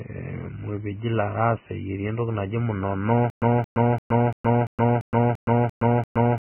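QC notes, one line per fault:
throughout, Vorbis compression: hissy, grainy speech with blurred attacks and nothing above 3 kHz. The spectrogram shows a hard ceiling and noisy treble, likely from a very low bitrate near 10 kbps.
3.3 s to end, stutter with silent gaps: a 224 ms burst repeats nine times, every 342 ms, separated by 118 ms of flat digital silence. The waveform shows identical blocks, likely from a stalled stream.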